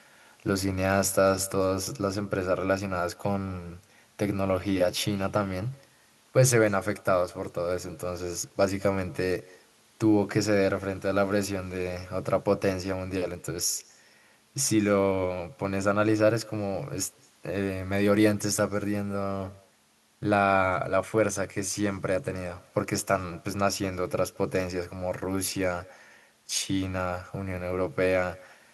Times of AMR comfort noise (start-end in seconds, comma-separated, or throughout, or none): none